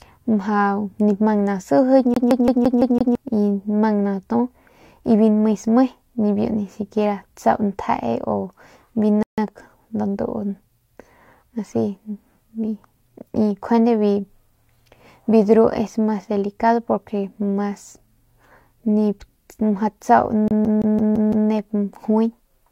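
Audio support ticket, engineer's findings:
Rapid, even stutter at 2.14 to 3.15 s: the same 169 ms slice of speech plays six times, a brief mute at each jump. CD stuck on one turn. Disc surface scratch likely, knocking the laser back one track each rotation.

Identical stutter at 20.48 to 21.49 s: same 169 ms loop, six repeats, same clicks of silence between passes. Same CD stuck on one turn fault, tracking failing again at a damaged spot.

Dead silence at 9.23 to 9.38 s, then speech resumes exactly where it left off, nothing skipped. Rebuffering stall: player drained its downloaded audio and waited for more data. Adds 150 ms to playback, no audio lost. Network delivery falling behind playback.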